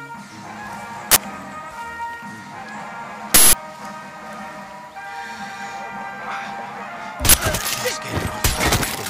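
Uninitialised buffer bursts interrupt the audio at 1.12–1.16 s, 3.34–3.53 s and 7.29–7.34 s, the two short ones heard as sudden, loud cracks and the longer one as a loud blast of harsh digital noise. In each case a buffer went to playback before any audio had been written into it, so whatever data was left in that memory was played as samples. The two 46 ms bursts fit a 2048-sample block, and the longer 186 ms burst fits an 8192-sample block.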